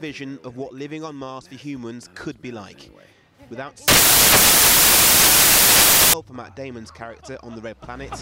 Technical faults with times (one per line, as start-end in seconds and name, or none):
3.88-6.13 samples built from the wrong bytes